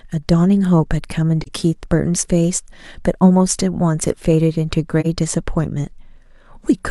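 At 1.42 to 1.49 s and again at 5.00 to 5.06 s the speech briefly dips: AAC frame loss with muting. Each gap fits one zeroed frame of about 43 ms, faded by overlapping windows.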